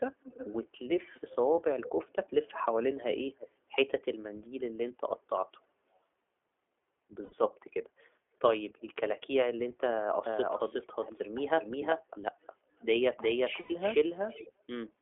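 The whole clip carries the iLBC codec's sound: speech confined to roughly 300 Hz to 3.4 kHz, with a rough, slightly synthetic texture from coding each 20 ms frame independently. That texture fits iLBC's 15.2 kbps mode rather than a smoother full-band codec.

Echo leak appears at 0.21 to 0.79 s, 1.11 to 2.56 s and 3.38 to 3.49 s. A repeat of the speech trails about 335 to 340 ms behind, starting around 10 dB down and fading to much quieter. The likely cause is a far-end loudspeaker whose echo canceller let residue back through. It recurs faintly at 7.54 to 7.6 s and again at 14.28 to 14.52 s, at 348 and 360 ms.

Lost iLBC frames at 7.24 to 7.34 s (80 ms) and 13.60 to 13.72 s (100 ms) sound like a briefly held, buzzy vowel. Speech snaps back at once, unlike a slow-recovering dropout.

From 10.26 s to the end, a doubled audio track adds a second copy, as loud as the original, about 400 ms late. 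It is likely a second capture path out of step. Unlike the echo leak, it is steady, undistorted and abrupt to begin.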